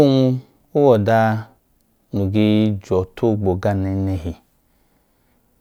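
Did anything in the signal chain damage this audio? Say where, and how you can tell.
No, nothing along the chain left a mark I can hear on this speech, so there's no stage to point a finger at.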